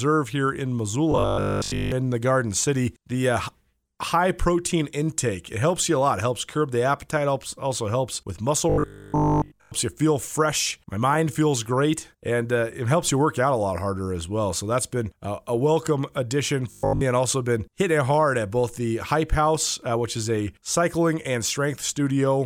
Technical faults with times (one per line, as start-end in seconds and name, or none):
1.12-1.92 robotic sound from repeated short buffers
8.70-9.72 robotic sound from repeated short buffers
16.71-17.01 robotic sound from repeated short buffers